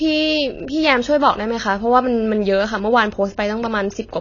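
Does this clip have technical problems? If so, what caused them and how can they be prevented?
Yes. Throughout the speech the sound is dull and smeared, with nothing above about 7.1 kHz, and the sibilants and sustained sounds carry a plainly audible warbling, fizzy texture. The likely cause is AAC compression at a low bitrate, consistent with AAC-LC at about 24 kbps. Starved of bits, the encoder dropped the upper band and quantised the remaining frequency lines coarsely. Encoding at a higher bitrate, or keeping an uncompressed master, prevents this.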